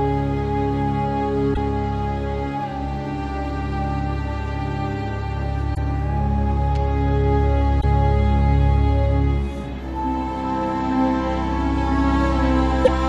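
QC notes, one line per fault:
1.53–1.57 s, 5.74–5.78 s, 7.80–7.84 s, 12.84–12.89 s: broken MP3 bit reservoir, likely. Each is a roughly 40 ms glitch, under two 26.1 ms frames, where the sound skips ahead and the first frame after the cut decodes from the wrong bytes. A spectrogram shows a brief vertical smear or gap; the waveform shows an abrupt discontinuity.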